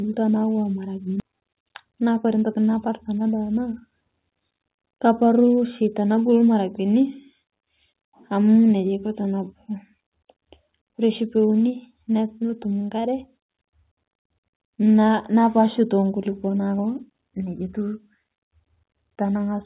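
Speech at 1.2 s lurches forward with no gap, as though part of the sentence was never said, and the two sides of the cut are butted straight together. That is a skip ahead: a stretch of roughly 0.7 s was thrown away, either lost on the way or discarded by the jitter buffer when it overflowed, while later audio was already queued, so playback simply resumed from the newer material and the delay dropped by the same amount. Right after, from 1.29 to 2.50 s, the talker sounds slightly rushed while the pitch stays put, running at about 108% of normal speed. This is a jitter buffer speed-up. The buffer still held more audio than its target, so the receiver trimmed many short pitch-period-sized slices in quick succession, removing around a tenth of a second in total to bring latency back down. Throughout, the call path's G.711 mu-law coding at 64 kbps leaves nothing above 4 kHz, giving the familiar narrowband telephone tone.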